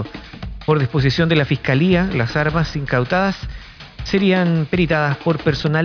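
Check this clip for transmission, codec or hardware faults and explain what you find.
Checking this clip turns up no faults to explain.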